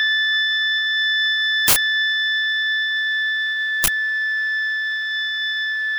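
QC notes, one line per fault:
1.68–1.76 s and 3.84–3.88 s, uninitialised buffer: 80 ms and 40 ms blocks were played before audio was written to them, so leftover memory became a loud crack or burst of digital noise.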